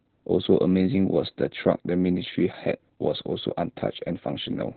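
Opus voice compression at a very low rate, consistent with about 8 kbps in SILK narrowband mode, runs throughout this speech, cutting everything above 4.5 kHz and leaving it muffled, hoarse and faintly robotic.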